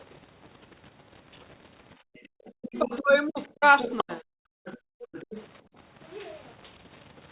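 Throughout the clip there is a grainy, signal-following distortion that points to low bit depth without dither, likely rounding to about 8 bits. The grit sits roughly 30 dB below the speech. It thickens on quiet tails and sputters near silence rather than forming a steady hiss. That sets it apart from the ordinary coding noise of the call path, which cuts everything above 4 kHz, consistent with G.711 mu-law.

From 1.96 to 2.33 s the background is gated by the echo canceller. The room tone falls by as much as about 33 dB for around a fifth of a second, then returns.

Overlapping this, from 2.14 to 2.98 s, the other side's voice leaks through at roughly 20 dB below the talker. Its likely cause is loudspeaker echo the canceller failed to remove, and it adds to the sound rather than taking anything away.

From 2.61 to 4.23 s the speech is suppressed in double talk. The talker's own voice dips by as much as about 35 dB, in pieces totalling about a second. 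This is a loss in the main voice itself, not in the background. It likely tracks the far side talking, which leaks through again at 3.79 to 4.03 s, about 15 dB down.

Further gating follows from 4.51 to 5.13 s, with the background dropping as much as about 38 dB for about half a second. Faint leaked fragments about 25 dB down come during this gap at 4.65 to 4.78 s and again just after it at 5.13 to 5.44 s. A last, shallower gate of about 19 dB runs from 5.62 to 5.77 s.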